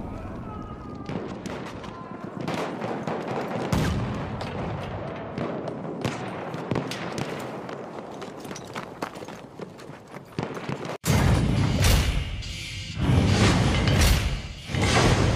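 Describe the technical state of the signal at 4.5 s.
At 4.5 s the signal is intact, with no dropout, distortion, glitch or other fault to be heard at that moment.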